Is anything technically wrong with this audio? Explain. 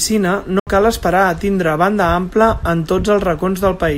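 Yes. At 0.59 s the speech cuts out and stays silent until 0.67 s, losing about 70 ms of sound. When it returns, it picks up further along rather than where it stopped, as though the audio kept playing through the gap. This is likely a Bluetooth dropout: audio packets failed to reach the headphones in time and were discarded, leaving the output silent until valid packets arrived again. A gap this size fits roughly three lost packets.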